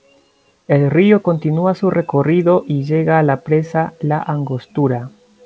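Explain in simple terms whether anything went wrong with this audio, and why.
Nothing went wrong here: the speech came through an ordinary internet call line that, as this kind of call line does, carries nothing above 8 kHz, and that missing top end is simply how the line works rather than a fault.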